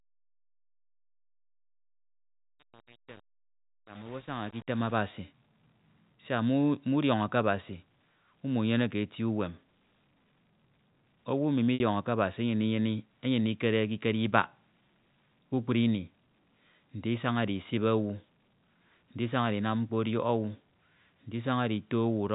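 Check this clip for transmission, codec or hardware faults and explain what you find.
One transmission fault stands out: packet loss with pitch repetition from 11.74 to 11.80 s. About 60 ms of the speech is missing, which fits three lost 20 ms packets. The receiver bridges the gap by repeating the last pitch period and fading it over roughly 50 ms. The sound becomes a brief, held buzz that sinks toward silence, and then a short cross-fade brings the speech back. The G.711 telephone band limit is audible with nothing above 4 kHz.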